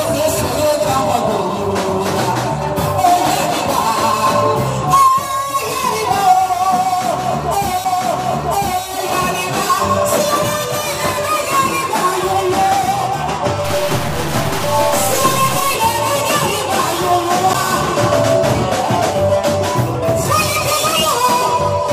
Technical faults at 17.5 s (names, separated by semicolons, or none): CD skip